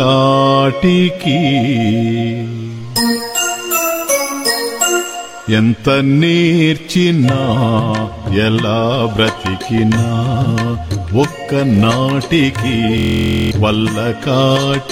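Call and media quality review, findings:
System hang loop, 12.98 to 13.51 s: host or driver stalled while the audio device kept replaying its ring buffer. One 23.22 ms slice repeats about 23 times, a buzz at 43.1 Hz, consistent with a 1024-sample buffer. Roughly half a second of audio lost.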